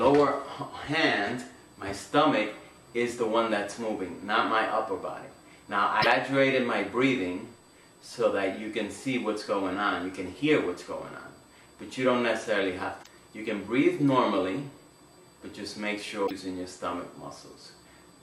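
A thin, fixed-pitch whine runs under the whole clip, pitched at 8 kHz with its strongest component an octave up at 16 kHz, sitting faint, roughly 35 dB below the main sound. This is USB whine: current drawn in 125-microsecond microframes leaks into the audio through power or ground.

At 6.01 s a brief glitch lasting about 50 ms breaks through, followed by similar glitches of about 75 ms at 13.00 s and 16.24 s. These are damaged data in a compressed stream. Corrupted bytes make the decoder misread frames, lose sync and hunt for the next valid header.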